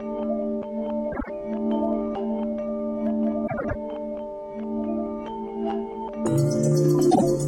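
Frames out of order at 1.12–1.30 s, 3.47–3.75 s and 7.11–7.23 s: adjacent blocks of about 52, 105 and 26 ms play swapped, giving a garbled flutter, seen as abrupt spectrogram discontinuities and waveform steps.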